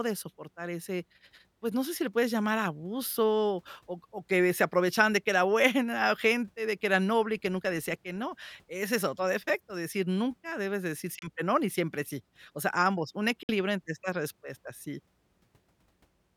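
Speech clip with two gaps consistent with a Bluetooth dropout: silence from 11.19 to 11.28 s after "decir nunca debes decir", and from 13.43 to 13.52 s after "sea ambos un". Speech resumes abruptly, skipped ahead, likely because audio packets reached the headphones too late and were discarded.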